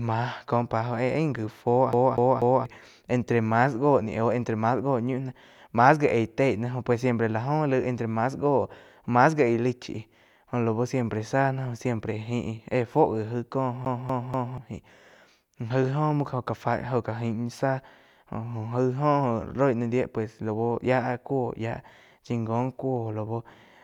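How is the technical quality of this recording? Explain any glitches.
Two skipping-CD glitches interrupt this speech recording. At 1.93 to 2.66 s and again at 13.85 to 14.58 s, the CD gets stuck on one turn. A scratch throws the laser back each revolution. A 243 ms slice repeats three times, with a brief mute at every jump, giving a fast, even stutter.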